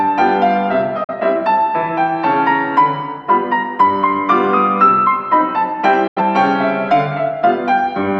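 The sound fades to silence at 1.04–1.13 s and again at 6.07–6.21 s: a digital broadcast dropout, where the receiver muted after losing frames.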